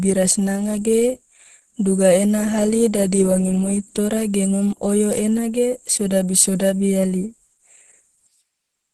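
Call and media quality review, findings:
Opus compression, whole clip, 0 to 8.9 s. Speech muffled and hoarse, grainy texture, nothing above 12.1 kHz. Likely the Opus encoder in hybrid mode at a low rate, consistent with about 16 kbps: band energies kept, missing detail filled with noise, top band cut. Unlike MP3, less swirling, fewer watery holes; damage is roughness, plainly audible.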